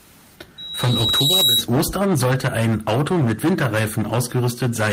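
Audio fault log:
throughout: hard clipping. A harsh fuzz sits on every loud stretch of the speech, with crackle on the peaks. The signal is driven about 16 dB past what the chain can pass, so roughly a fifth of samples hit the limit and are flattened, adding high harmonics.
0.58–1.64 s: loudspeaker feedback squeal. A single 3.9 kHz tone swells over about a second into a piercing whistle, ending up roughly 10 dB above the speech. A microphone is hearing its own loudspeaker, and at that frequency the loop gain exceeds one, so the tone feeds itself.
4.09–4.11 s: lost packet rebuilt from error correction. There is no gap, but a brief 20 ms patch sounds rougher and noisier. This fits one lost packet replaced by a low-bitrate copy carried in the next packet, which lacks the highest frequencies.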